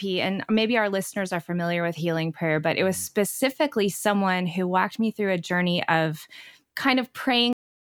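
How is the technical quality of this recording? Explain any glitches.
The recording has one clear fault: a cut-off end at 7.53 s. The final stretch of audio was never written out or played back, so the stream simply stops partway through the speech instead of finishing. From 7.53 s to the end of the clip there is only digital silence. The sound halts abruptly with no natural decay or room tail, leaving the last utterance truncated rather than fading out.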